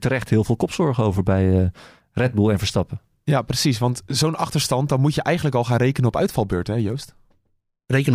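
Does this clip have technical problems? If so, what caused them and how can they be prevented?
Yes. DC step at 6.40 s: the waveform's zero line suddenly jumps by about -34 dBFS, causing one low thump beneath continuing speech, and the offset then decays as a 5 Hz high-pass drains it. Preventing converter recalibration mid-recording and DC-blocking switched inputs avoids this.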